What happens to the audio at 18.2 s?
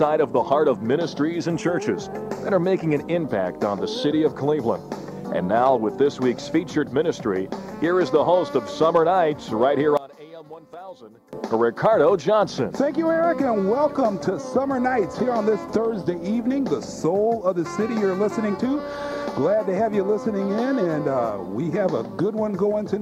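Nothing goes wrong at 18.2 s; the audio plays through that moment intact, with no dropout, click or distortion.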